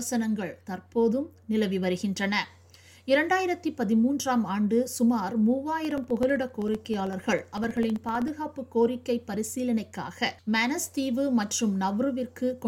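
From 5.85 to 8.28 s, something repeatedly stalls the USB bus or audio driver every 64 ms, causing periodic USB or driver dropouts: each stall replaces around a millisecond of audio with silence, so a steady train of roughly forty ticks runs through the sound.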